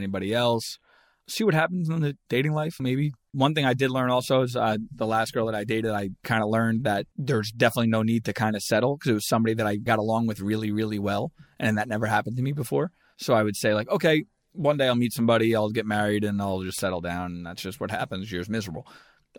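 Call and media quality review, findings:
Bit error spike at 16.79 s, between "married and I'll just" and "settle down". A flipped bit in memory or on a digital link corrupts two adjacent samples, jumping about -14 dBFS. Result: single sharp broadband tick, unrelated to the speech.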